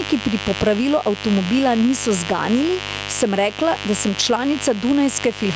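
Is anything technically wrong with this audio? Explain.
Yes. Two faults run through the whole speech clip.

Mains buzz sits under the recording from start to finish, at roughly 15 dB below the speech. Sharp switching spikes, such as those from a dimmer, a rectifier or an unshielded line, leak in twice per 50 Hz cycle and spread harmonics well up into the kilohertz range. The result is a raspy, edgy buzz rather than a smooth low hum. A clean hum would stay down near 50 and 100 Hz. This one carries its rasp upward, stopping only where the call's microphone processing band ends at 8 kHz.

Gain pumping also runs throughout, with the gain swinging by around 10 dB. The likely cause is input gain set far too high and a fast limiter or compressor clamping down on every loud syllable. Loud and quiet passages end up squeezed close together. What sets this apart from a noise gate is the direction of the change: a gate makes the gaps go quiet, while pumping pulls the gain down on loud sounds and lets it rise again between them.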